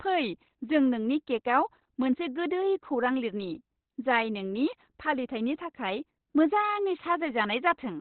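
The speech is muffled and hoarse from start to finish, with nothing above 4.2 kHz, likely Opus compression in its narrowband speech mode, which fits a 12 kbps stream.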